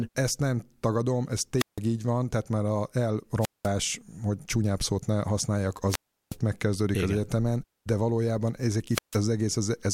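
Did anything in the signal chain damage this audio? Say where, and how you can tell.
Yes: wireless microphone squelch dropouts at 1.58, 3.40, 5.87 and 8.90 s. Each is a hiss rise, then 0.15 to 0.36 s of mute as the fading radio link trips squelch.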